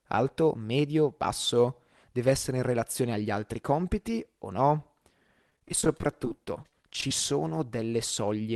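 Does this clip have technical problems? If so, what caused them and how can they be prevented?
Yes. After "altri compiti o no", 5.50 to 7.11 s has repeated packet loss (robotic sound): two dozen-odd holes up to 31 ms, each patched by extending the last sound. The result is choppy sound with pieces missing, not one silent dropout. A larger jitter buffer with forward error correction prevents this.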